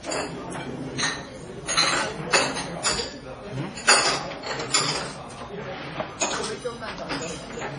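Throughout the clip, the likely cause is heavy MP3 compression at a low bitrate, consistent with roughly 32 kbps. The encoder has cut everything above 10.5 kHz and drops weak detail frame to frame, so the sound is dull, watery and swirly, with smeared attacks.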